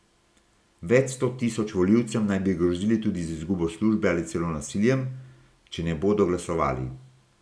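No technical faults can be heard anywhere in the speech recording, and the signal stays steady and intact throughout.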